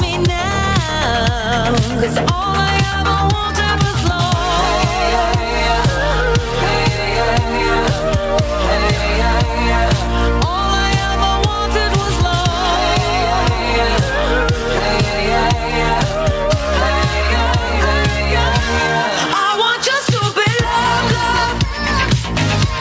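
Gain pumping runs through the whole clip. The swing is roughly 10 dB. Loud and quiet parts sit too close in level, so the sound is squashed. The likely cause is input gain set far too high, with a fast limiter or compressor clamping down on each peak. Nothing reaches above 8 kHz, which fits a G.722 call codec.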